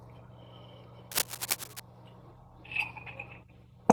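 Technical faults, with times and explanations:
1.11 to 1.80 s, cable scratch noise: a dense, uneven rustling rises to roughly the level of the speech for about 0.7 s, likely from a worn cable or connector shifting its contact. Unlike steady hiss or isolated clicks, its bursts crowd together irregularly and then stop.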